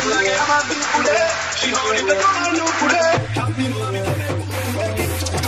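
From the start until 3.17 s the sound is dull and narrow, with nothing above about 7.6 kHz and a very faint added noise floor. At 3.17 s it opens up with no gap or level jump. The likely cause is an input switched to a poorer device.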